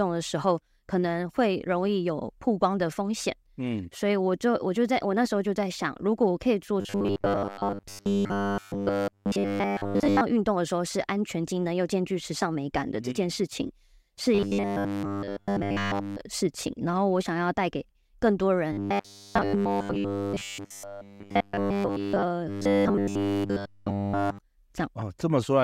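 Robotic sound from repeated short buffers at 6.81–10.22 s, 14.35–16.21 s, 18.72–22.23 s and 22.49–24.39 s: a rigid 100 Hz metallic buzz, likely from a 10 ms slice being looped in place of most or all of the speech.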